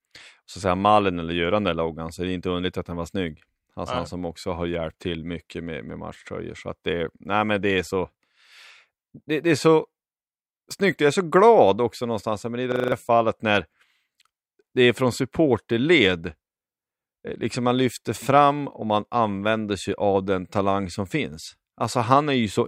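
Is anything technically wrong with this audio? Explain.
Yes. From 12.72 to 12.92 s there is a system hang loop. The computer or its audio driver stalled while the sound hardware kept replaying the same 40 ms stretch of its ring buffer, five times at 25 Hz, so a fifth of a second of speech is lost. It comes across as a rapid, rhythmic machine-gun stutter. Unlike a dropout, the gap is filled by identical repeats rather than silence.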